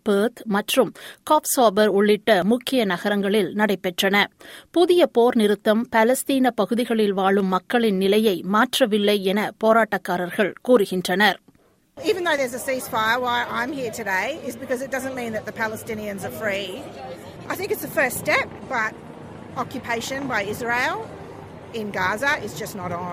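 Audio missing between chunks, likely from a recorder working in 5-second blocks and dropping roughly 20 ms at each handover. The sound skips abruptly, with both sides butted together and no gap, at 2.42, 7.40, 12.38 and 22.34 s.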